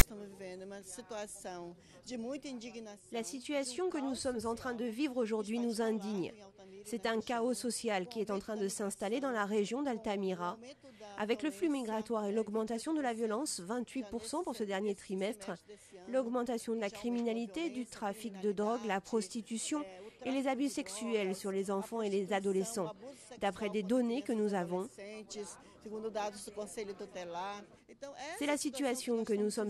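The audio opens with file tags played as audio, from 0 to 0.02 s. A block of text tags is read as samples. It gives a brief, harsh rasp pushed off to one side. Zero padding in the block then plays as silence before the sound begins.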